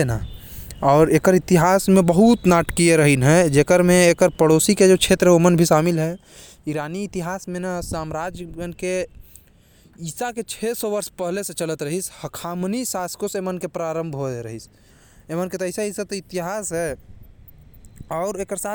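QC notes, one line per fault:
No technical faults were found in this speech recording; nothing is flagged for correction.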